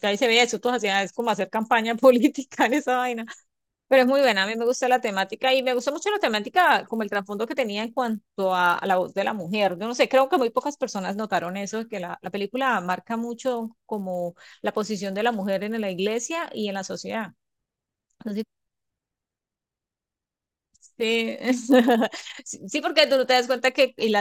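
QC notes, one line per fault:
throughout, resampler restarted on every block: each 10 ms block converted separately, so edge errors form a 100 Hz buzz heard only while speech is present.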